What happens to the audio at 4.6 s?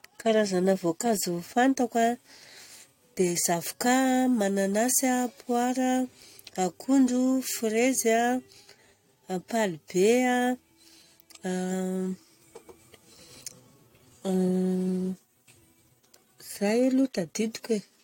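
Nothing goes wrong at 4.6 s; the speech runs on intact through that moment, with no dropout, click or distortion.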